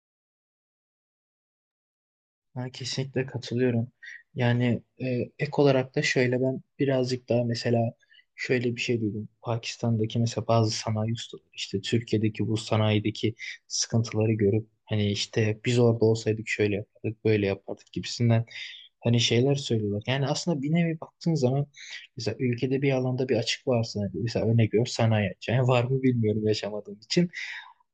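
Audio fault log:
No audible faults detected.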